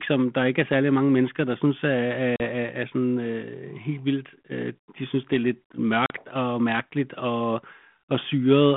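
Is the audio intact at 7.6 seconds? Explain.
Yes, at 7.6 s the speech runs on without any fault, carried through the G.726 ADPCM telephone path at 32 kbit/s and its 150 Hz to 3.4 kHz line band.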